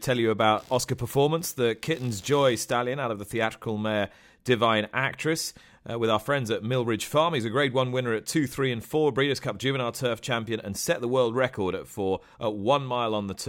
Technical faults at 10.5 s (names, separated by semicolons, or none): none